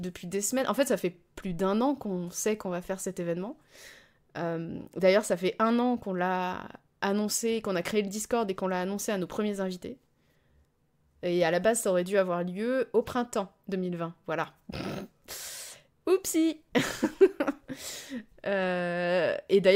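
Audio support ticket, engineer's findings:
Speech signal checked in full with no technical faults found; levels, continuity and timing hold steady throughout.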